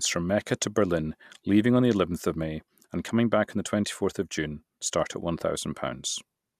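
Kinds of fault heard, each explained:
DAB burbling: From 4.54 to 4.61 s, just before "start at", the speech briefly burbles. The span of about 70 ms fits roughly three MP2 frames. Weak reception lets bit errors, at around 0.2 percent, slip past the error correction and corrupt the coded audio. Damaged samples then put short blips of noise in single sub-bands, and damaged scale factors make sub-bands jump in level for up to a frame.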